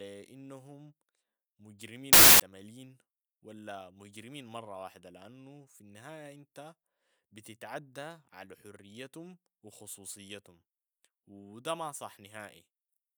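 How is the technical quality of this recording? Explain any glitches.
The recording has one clear glitch. From 2.13 to 2.40 s there is a wrong sample width fault: data apparently written as packed 24-bit samples were read back as 32-bit, splicing mismatched bytes into each value. The speech is buried under loud noise and sped up about 1.33 times with raised pitch.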